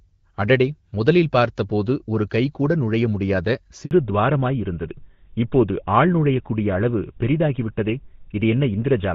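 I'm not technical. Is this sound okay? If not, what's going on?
No. At 3.85 to 3.91 s, right after "பார்த்தபோது ஒரு கைகூட நுழையமுடியாத", there is a handover gap: the call switched networks and about 60 ms of speech never arrived, so the voice briefly drops out and whatever was said in that moment is lost.

From 3.91 s to the end there is a fallback to narrowband. The call moved from HD Voice to an older phone codec, so everything above 4 kHz is missing. The voice sounds duller and rougher than in the clearer first part.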